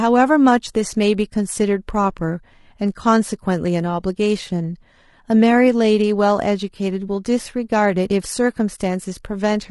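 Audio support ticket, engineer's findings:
Speech roughened and grainy throughout, plainly audible. Noise filling gaps between voice harmonics, top band thin and synthetic-sounding. Likely low-delay AAC compression (AAC-ELD, as in video calls); damage level fits roughly 32 kbps. Short frames smear pitch structure. Differs from standard AAC: grain sits between harmonics rather than pre-echo on onsets.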